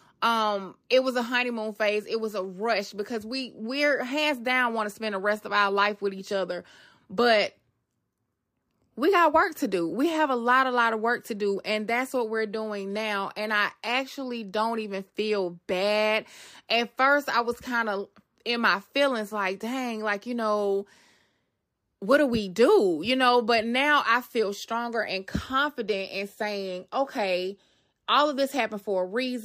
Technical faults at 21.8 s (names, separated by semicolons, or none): crude rate conversion